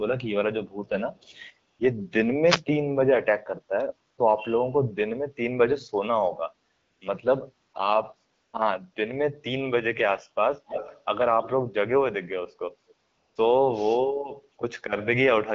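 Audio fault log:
1.73–1.79, 4.11–4.17, 6.71–7.01, 7.69–7.73, 8.33–8.53, 8.93–8.95 and 13.07–13.35 s AMR comfort noise: the phone treated these 20 to 300 ms gaps as silence and stopped sending speech frames, so the receiver filled them with smooth synthetic noise that switches abruptly in and out.
2.45–2.62 s wireless microphone noise hit: the analogue FM microphone's radio signal faded, letting receiver noise surge for about 170 ms, heard as a brief swish of static over the sound.
10.67–11.01 s echo leak: a delayed copy of the sound, about 246 ms late and roughly 10 dB down, comes back, likely because a far-end loudspeaker's echo canceller let some through.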